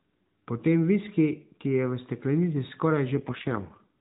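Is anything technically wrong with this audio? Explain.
Yes. From 3.16 s to 3.98 s there is an AMR rate drop. The speech is already band-limited below 4 kHz by the AMR narrowband mobile codec, and that band holds steady through the event with no gap. A weak radio link made the network switch the encoder to a lower mode and spend the saved bits on error protection. With fewer pulses per subframe, the voice turns buzzy and synthetic, which fits a drop from 12.2 kbps to 4.75 kbps.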